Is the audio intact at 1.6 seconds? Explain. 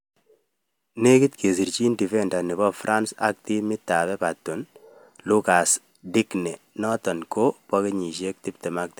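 Yes, at 1.6 s the speech plays through intact, with no dropout, click or other fault at that moment.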